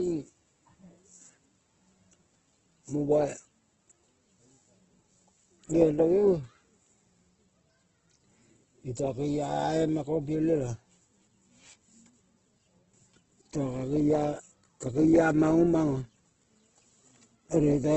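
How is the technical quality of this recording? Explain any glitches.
The recording is held back by Opus compression running for its whole length. The encoder is likely starved of bits, which fits a rate near 12 kbps in Opus's CELT music mode. With too few bits, it keeps each band's energy but fills the detail with folded or noise-like content and restricts the bandwidth to wideband. The speech therefore sounds heavily rough and grainy throughout, with nothing above about 8 kHz.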